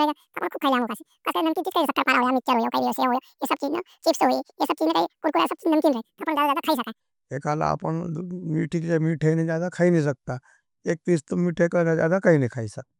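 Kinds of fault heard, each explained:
Wrong sample rate: from the start to 7.0 s the speech runs at double speed and a full octave high, chipmunk-like and hurried, because audio recorded at 24 kHz is being played back at 48 kHz with no conversion, so both speed and pitch scale by two.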